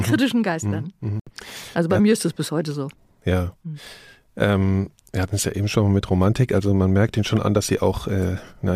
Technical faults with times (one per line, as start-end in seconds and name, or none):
1.20-1.30 Bluetooth dropout